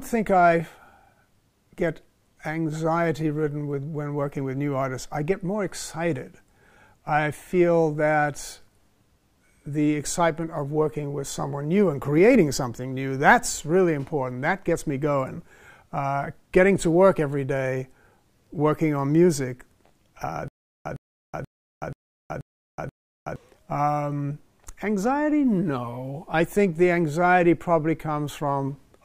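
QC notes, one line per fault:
20.48–23.36 s, stutter with silent gaps: the same short burst, about 109 ms long, comes back six times at a steady 482 ms pace, with roughly 373 ms of dead digital silence after each one, so you get that choppy, hiccuping rhythm. It's likely the player or stream stalling, replaying its last fragment on each retry and then running dry. Whatever should have played during those gaps is simply gone.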